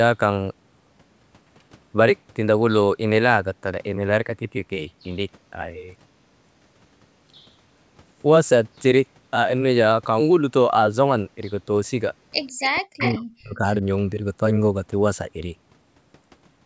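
From 12.47 to 12.68 s, a faint copy of the speech trails 154 ms behind, about 15 dB down. This is an echo leak, likely loudspeaker sound the echo canceller missed. It shows on a spectrogram as a ghosted, offset repeat of the harmonic bands.

From 12.62 to 13.63 s, the speech dips by up to about 40 dB. This is speech suppressed in double talk, likely the canceller turning down both its own talker and the loudspeaker echo at once. The waveform shows the level sagging over roughly a second.

From 12.99 to 13.15 s, the echo leak returns, about 10 dB down and again 154 ms late.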